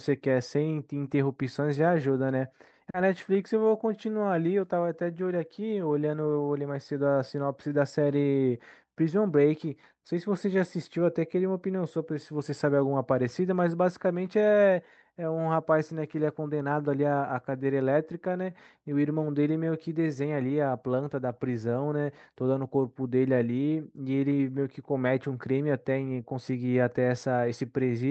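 From the very start you can hear clock drift between sender and receiver in this speech clip. The sending side's clock is running slow, roughly 3 percent behind the receiver's, so the jitter buffer keeps draining instead of holding steady. The receiver has to pad things out to cope, and the whole clip ends up feeling a touch sluggish and not quite even in its pacing, as if the talker is dragging very slightly.

The repeated timing corrections run from about 0.10 s right through to 27.93 s. These are the receiver's fix for that slow clock: it keeps repeating tiny slivers of audio so the stream plays out at about 97 percent speed. Every edit goes the same way, stretching, but they land at uneven spacing. Together they add something like a second over the clip. Individually they're small, so you mostly notice an unsteady tempo and the odd faint hiccup.

Early on, between 2.90 and 2.96 s, there's a short stall from a late packet. 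A packet simply hadn't arrived when it was due, and the buffer ran dry. The receiver held the last sound for 40 ms until the data turned up, then carried on from the same point with nothing lost. It comes across as a sound hanging on a beat too long, with a slight buzz or dip. All of this rides over the Opus call path, whose 8 kHz audio bandwidth caps the top end and fits a modest bitrate around 32 kbps.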